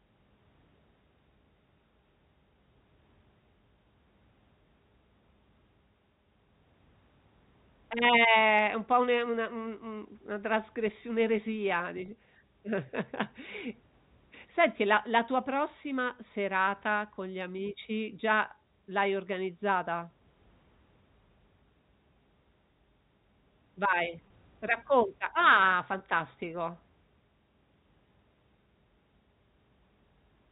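At 12.06 to 12.08 s, just after "un una trasgressi un'eresia", and again at 24.28 s, the sound briefly holds with a buzzy tint: packet loss with pitch repetition. About 20 ms went missing each time, consistent with a single lost packet, and the last pitch period was repeated to fill the gap.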